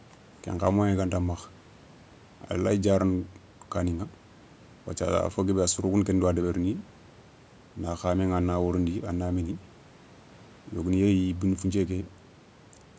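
No technical faults can be heard in this speech.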